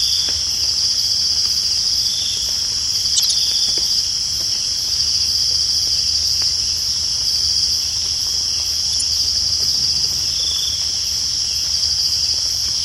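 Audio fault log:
3.16–3.29 s and 8.92–9.01 s, corrupt frame decoded: damaged compressed frames were played anyway, so misread gains and codes scattered energy at the wrong frequencies. That causes a spurious burst lasting about 0.12 s (a handful of frames), then about 0.09 s (a couple).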